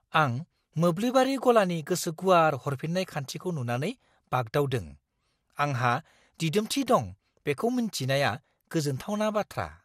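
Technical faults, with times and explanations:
6.87 s: DAB burbling. A brief burst of burbling cuts across the speech. Weak reception let bit errors, around a tenth of a percent, slip past error correction into the MP2 data. Corrupted samples put short blips of noise into single sub-bands.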